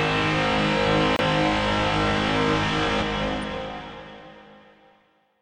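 At 1.16 to 1.20 s a corrupt frame was decoded: damaged bits in one frame produced a loud, brief chirp, squeak or burst of noise, unlike a click or a silent dropout.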